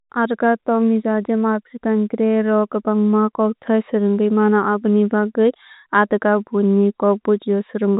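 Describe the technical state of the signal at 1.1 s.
At 1.1 s the speech is intact, carried by ordinary G.711 telephone coding with nothing above 4 kHz.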